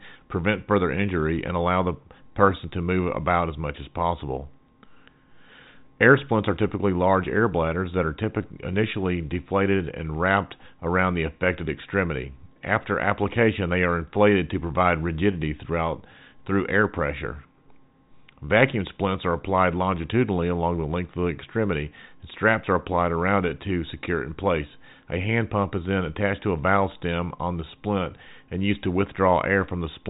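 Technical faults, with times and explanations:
No technical faults can be heard in this speech. It has been carried over G.711 telephone coding, so nothing reaches above about 3.8 kHz, and the faint, level-following hiss of the logarithmic 8-bit quantisation is at most barely noticeable.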